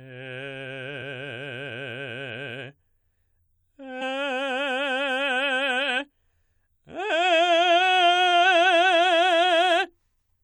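A music clip with two very short glitches, at 1.01 s and 4.01 s, each heard as a brief chirp or blip cutting into the sound. Both are damaged data in a compressed stream: corrupted bytes in the encoded file make the decoder misread or discard the affected frame, lose sync, and search forward for the next valid frame header. Each disturbance lasts only about 10 to 20 milliseconds before clean decoding resumes.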